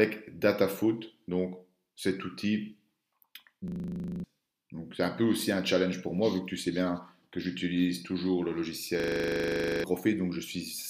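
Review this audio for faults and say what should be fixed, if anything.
System hang loop at 3.68 to 4.24 s and again at 9.0 to 9.84 s: the system stalled while the audio hardware kept replaying the same 40 ms stretch of its ring buffer. This produces a rough 25 Hz buzzing stutter and drops about half a second, then about a second, of real audio. To prevent it, keep the audio thread at high priority and make the driver or watchdog mute the output when the buffer stops being refilled.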